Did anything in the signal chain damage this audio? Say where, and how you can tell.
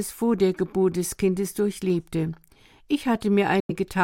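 Yes. At 3.60 s the sound drops abruptly into silence lasting about 0.11 s, until 3.71 s, with timing intact afterward. This is a corrupt frame muted at the codec stage: bit errors made the decoder reject what fits several consecutive compressed frames, and playback substituted silence.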